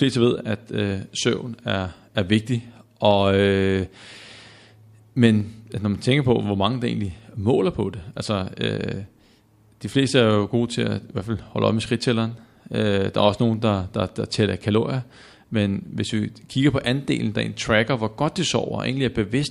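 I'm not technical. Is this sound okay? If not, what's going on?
No. Two quick, sharp clicks cut through the speech, at 5.40 s just before "når man tænker på" and at 13.54 s between "der er også" and "der der der tæller". These are likely dropped samples: a tiny fraction of a millisecond of audio went missing, so the sound jumps abruptly.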